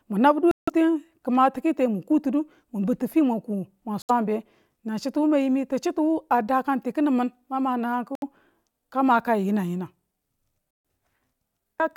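Bluetooth dropouts are the likely cause of four silent holes in this speech clip: 0.51 to 0.70 s, 4.02 to 4.11 s, 8.15 to 8.23 s and 10.71 to 10.85 s. Each cuts off abruptly or with a fade of a few milliseconds, and when the sound returns it has moved on, as though it kept playing through the gap. That fits audio packets arriving too late at the headphones and being discarded, leaving the output empty until valid data came through again.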